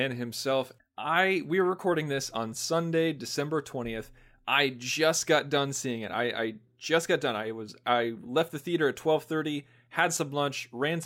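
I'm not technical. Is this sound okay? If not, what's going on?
Yes, the sound is technically in good shape, with nothing going wrong in the signal at any point.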